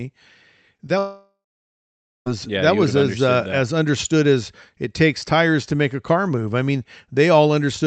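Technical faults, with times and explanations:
0.77 s and 0.87 s, short concealed packet loss: two small gaps of about 20 ms each, only a few hundredths of a second apart. The decoder patched each one by carrying the previous sound forward, so you get a quick smear or wobble rather than a clean hole, and then it blends back into the real signal.
0.98 to 2.28 s, long network dropout: about 1.3 s of audio goes missing, which is likely a network stall. The receiver stretches the last sound into a fading buzz or hiss, then leaves roughly 0.9 s of near silence before the audio picks up again, with the lost stretch simply gone.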